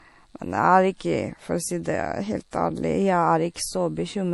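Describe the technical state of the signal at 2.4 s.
Low-bitrate audio saved at a high bitrate affects 2.4 s, as it does the whole clip. The speech stops sharply at about 11.5 kHz, with the artefacts of the earlier encoding still present. This likely comes from a roughly 48 kbit/s MP3 later re-encoded at a high rate, which cannot restore the missing detail.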